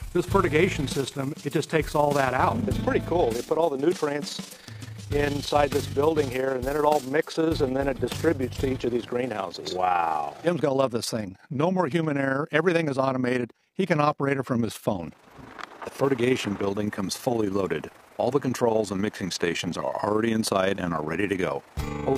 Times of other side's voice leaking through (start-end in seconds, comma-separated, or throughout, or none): none